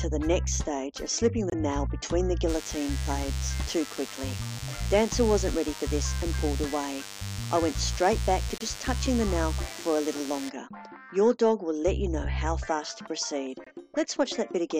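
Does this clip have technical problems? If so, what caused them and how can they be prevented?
Yes. Corrupt frame muted at 1.50–1.54 s, 8.58–8.62 s and 13.64–13.67 s: the decoder rejected damaged compressed frames and the player substituted silence, so the sound drops out abruptly. The first gap is long enough to suggest two frames. This can be prevented with error-checked transport or forward error correction, so damaged frames are repaired or resent before decoding.

DECT cordless phone buzz from 2.49 to 10.49 s: a nearby DECT handset or base station transmits a burst every 10 ms, and the audio circuitry rectifies it into a thin 100 Hz buzz with many harmonics, roughly 15 dB below the main sound. This can be prevented by keeping DECT equipment away from the recording chain and using shielded, balanced cabling.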